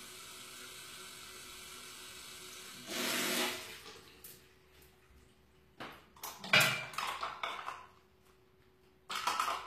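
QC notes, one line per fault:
Throughout: HE-AAC compression. The treble is gritty and metallic, and nothing remains above 14.9 kHz. The upper band is likely rebuilt by copying lower bands upward, so its harmonics misalign. The damage is plainly audible and fits a low bitrate near 24 kbps.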